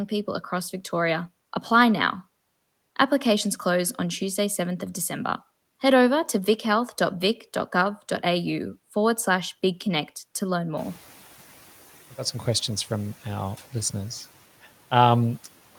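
A speech recording in which the noise suppressor is catching up: the room noise rises by about 16 dB around 11 s, and from 10.77 to 10.99 s it passes through with less reduction before sinking by about 5 dB over 220 ms as the noise estimate adapts. Unlike gating or pumping, this is a single settling after one jump, not level swings tied to the speech.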